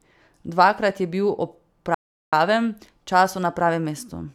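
The player likely ran short of data at 1.95 s after "je bil ob", a playback stall that cuts the speech to silence for 0.38 s, until 2.33 s.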